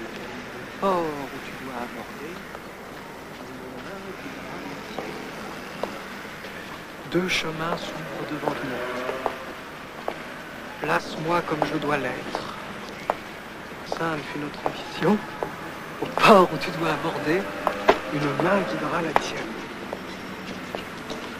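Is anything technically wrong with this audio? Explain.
No, no technical faults.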